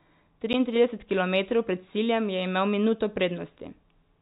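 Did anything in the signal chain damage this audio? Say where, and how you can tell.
Yes: packet loss filled with silence on the network stage. At 0.53 s, just before "kilometrov pred ciljem je", the speech drops out for 10 ms, which fits one lost packet. The receiver put silence in the gap, so the gap has hard edges, over the narrowband G.711 telephone path.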